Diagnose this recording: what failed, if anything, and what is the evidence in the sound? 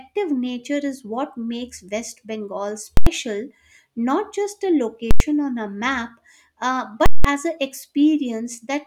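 Three times the speech is cut by a hard, very loud pop at each edge with nothing between: 2.97 to 3.07 s, 5.11 to 5.20 s, and 7.06 to 7.25 s. These are invalid numbers at full scale. A processing calculation produced infinite or invalid values that were clamped to the maximum, pinning the output for whole blocks. The 93 ms spans fit 4096-sample blocks, and the last, twice as long, fits an 8192-sample block.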